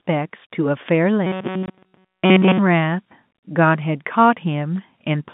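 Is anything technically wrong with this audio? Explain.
Yes. From 1.27 to 2.59 s there is robotic sound from repeated short buffers. Essentially the whole stretch turns into a rigid, metallic buzz at 188 Hz that only loosely tracks the speech. This is likely caused by audio arriving too slowly, with the playback filling each gap by looping a fragment of about 5.3 ms.

Inside that stretch, from 1.66 to 1.68 s, there is packet loss filled with silence. A 20 ms hole with hard edges cuts through the sound, which fits a single lost packet replaced by silence. The G.711 telephone band limits everything to roughly 150 Hz to 3.6 kHz.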